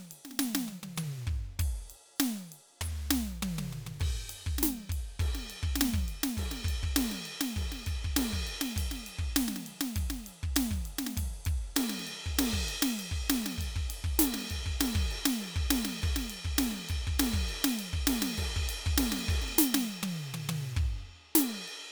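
Music clip, no audible faults.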